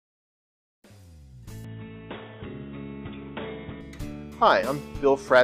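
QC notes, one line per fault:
1.65–3.81 s, input switched to a poorer device: with no gap, the sound turns dull and boxy, losing everything above 3.8 kHz, shifting level by around 5 dB and gaining a faint new noise floor, then clears. The cause is likely a narrower-band microphone or headset profile.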